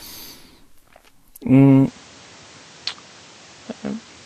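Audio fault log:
throughout  Vorbis compression: The encoding was likely Vorbis at low quality. It spent too few bits on the treble, so nothing survives above 14.2 kHz, and the upper band left below that cut-off is quantised so coarsely that fine detail turns into noise of similar energy. The speech is plainly hissy and grainy, with roughened tones and smeared consonant attacks. That degree of damage fits a bitrate of about 33 kbps.
1.87–4.26 s  Input switched to a poorer device: At 1.87 s the recording likely changed to a narrower-band microphone or headset profile, with no gap at the switch. From there to the end, nothing reaches above 8.7 kHz, so the voice abruptly turns duller and boxier. It also drops by about 5 dB, and a new background noise sits roughly 30 dB below the speech. That noise comes from the second device's own floor.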